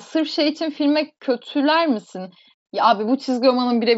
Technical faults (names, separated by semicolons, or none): none